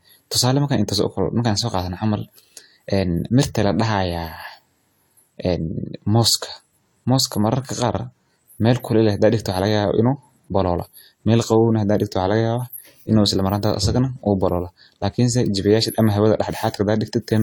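Speech, with transcoding between lossy codecs throughout. Two sets of coding artefacts are heard together, one smeared over the other. The sound fits AAC at around 64 kbit/s, likely re-encoded as HE-AAC near 40 kbit/s. The chain's lowest band limit remains.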